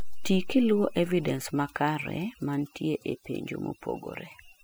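From start to finish, the speech carries overdone noise removal: a noise reduction stage was pushed far too hard on a noisy source, so any frequency band sitting close to its noise estimate gets pulled down steeply or shut off, and the softer parts of the speech are cut along with the noise. The pauses collapse into near silence dotted with twinkling, chirpy specks.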